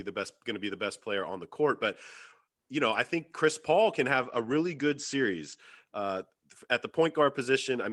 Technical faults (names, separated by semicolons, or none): call bitrate drop